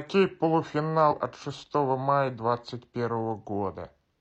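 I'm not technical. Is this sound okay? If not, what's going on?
No. At about 1.07 to 1.13 s the speech breaks into a brief glitch, caused by damaged data in a compressed stream that the player briefly couldn't read.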